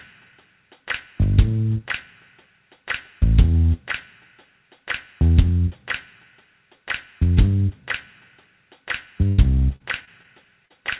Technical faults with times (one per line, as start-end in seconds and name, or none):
9.28-9.40 burst of packet loss
9.76-10.26 repeated packet loss (robotic sound)
10.66-10.72 short concealed packet loss